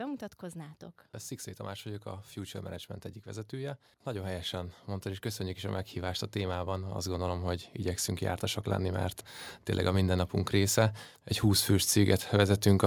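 From 1.82 to 9.08 s, automatic gain rising lifts speech and background together by about 13 dB, then by about 4 dB from 9.85 to 12.82 s; the waveform envelope and spectrogram floor climb steadily.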